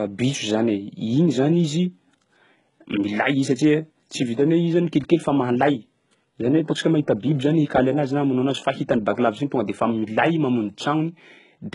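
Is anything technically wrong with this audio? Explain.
Yes. HE-AAC compression runs throughout the speech: the treble is likely rebuilt by spectral band replication, copied up from lower bands under a coarse envelope, so s sounds turn gritty and lispy. Nothing reaches above 11.1 kHz, and the heavy damage points to roughly 12 kbps.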